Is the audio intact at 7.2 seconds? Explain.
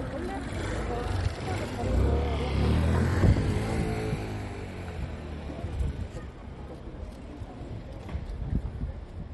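No. At 7.2 s, as across the whole clip, the sound is watery and swirly with nothing above about 11.8 kHz, likely MP3 compression at a starved bitrate, around 48 kbps, cutting treble and dropping weak detail.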